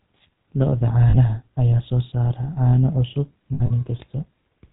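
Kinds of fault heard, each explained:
GSM full-rate codec: The whole clip has that gritty, buzzy roughness you get when speech is rebuilt from a vocal-tract model driven by sparse, regularly spaced pulses, with only every third excitation sample kept. Nothing comes through above 4 kHz, so it sounds dull and boxed-in, and the coding damage is plainly audible throughout. The texture fits the old 13 kbps GSM full-rate codec.
Lost GSM frames: There are two dropouts where the decoder covers missing data by replaying the last good frame's settings, giving a short rough, metallic ring instead of a clean gap. The first runs from 1.1 to 1.16 s and fills about 40 ms. The second is messier, with about 100 ms lost across 3.54 to 3.71 s and the longest stretch around 70 ms, so the ring there is longer and more broken up.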